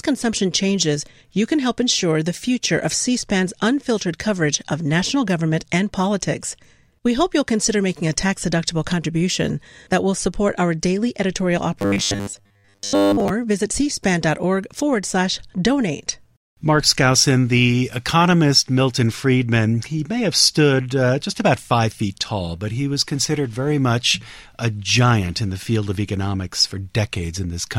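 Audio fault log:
11.79–13.30 s, robotic sound from repeated short buffers: right after "support our daily editorial", fresh audio likely stopped arriving in time, and the playback path filled the gaps by looping a very short slice, about 10 ms, while the real signal was dropped. For most of this stretch the speech is locked to a steady 100 Hz buzz set by that loop length, giving a flat, metallic, machine-like tone that only loosely tracks the syllables.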